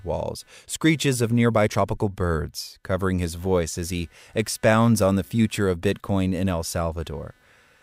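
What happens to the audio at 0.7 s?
At 0.7 s the speech carries computer activity noise, present throughout the clip: a faint buzzy chirping pulsing at around 300 Hz, roughly 40 dB below the voice, from processor and graphics load disturbing the shared audio ground. Unlike steady mains hum, it shifts with the computer's activity.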